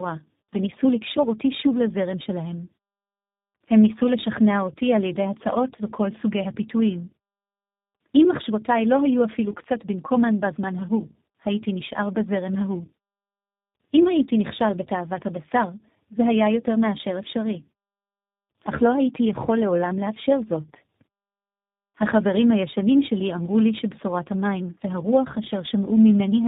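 Speech passed through tandem speech coding, apparently three speech coders in a row, likely ending in G.729A, each re-encoding the last one's damage, leaving rough, warbly speech with nothing above 3.8 kHz throughout.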